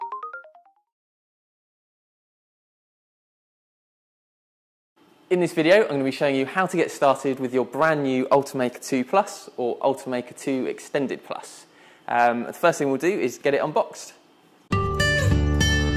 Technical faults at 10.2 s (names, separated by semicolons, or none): none